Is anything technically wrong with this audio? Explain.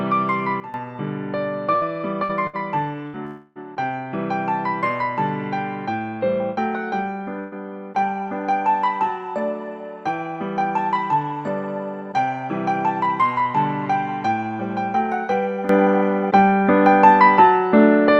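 Yes, there are three kinds of fault.

Sudden gain jump: From 0.60 to 0.74 s the level drops by about 12 dB and then returns, and from 15.69 s to the end it rises by about 12 dB. The likely cause is a gain change applied from one sample to the next with no ramp. The sound and its background noise shift together. On the waveform the envelope steps down or up at a vertical edge, and on a spectrogram the whole band changes brightness at once.

Burst of packet loss: Short gaps start at 1.75, 2.24, 2.47 and 3.07 s, each with about 60 ms of audio missing. A longer one runs from 7.39 to 7.56 s, with about 120 ms missing. At each gap the receiver extended the last sound and faded it down, giving a brief held buzz or fading hiss before the audio jumps ahead. On a spectrogram each gap shows as flat, smeared horizontal bands that fade, followed by an abrupt change where the audio resumes.

Long network dropout: From 3.25 to 3.58 s about 300 ms of audio never arrives, most likely because of a network interruption. 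The concealment stretches the last sound across the whole gap as a buzz or hiss that decays. It never falls fully silent before the audio resumes further on. On a waveform this appears as a repetitive, shrinking pattern. On a spectrogram it looks like a frozen, dimming slice with a hard seam where the audio returns.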